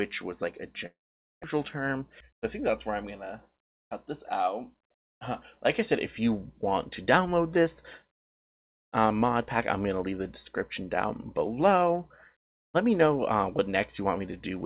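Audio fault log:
0.86 to 1.46 s, long network dropout. The audio likely stopped arriving for a stretch here. The last sound is carried on as a fading buzz, then gives way to silence for about half a second. When the audio returns, the missing part is simply gone, about 0.4 s of it. Nothing fills that gap. The sound jumps ahead from where it broke off. The fill and silence together cover roughly 0.6 s.
1.53 to 5.06 s, jitter buffer speed-up. After the dropout, the receiver is holding more audio than it wants. It trims tiny pieces, one or a few pitch periods long, again and again. The sound runs about 4 percent fast while keeping its pitch. Over these three and a half seconds, roughly 150 ms is removed in total. The pace then settles back.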